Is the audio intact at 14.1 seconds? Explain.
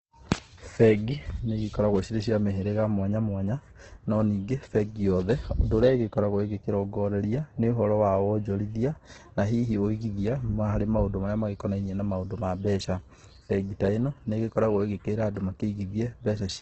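No. At 14.1 seconds the speech sounds rough, grainy and noisy, with a dull top end and no content above about 8.2 kHz. This runs through the whole clip. The likely cause is heavy Opus compression in its music-oriented CELT mode. At a rate that fits roughly 12 kbps there are too few bits to code each band accurately, so the encoder keeps band energies and fills the detail with folded or noise-like substitutes. The bandwidth is also held to wideband.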